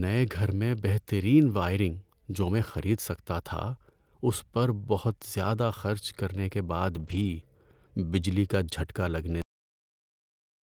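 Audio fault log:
6.95 to 7.33 s, lost packet rebuilt from error correction: speech turns rougher and noisier but never gaps, since the decoder played low-bitrate backup copies, which fits about ten lost packets.
9.42 s, cut-off end: the speech stops mid-sound and drops straight to digital silence with no decay, because the final buffers were never written or played out.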